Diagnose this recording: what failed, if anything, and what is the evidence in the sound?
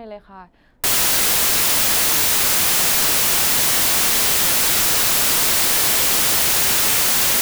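Sample-format conversion failed. From 0.84 s to the end, the speech becomes loud, harsh broadband noise, the sign of samples built from the wrong bytes. Misaligned or swapped bytes promote the jittery low bits. The spectrogram shows flat broadband fill, and the waveform stays dense.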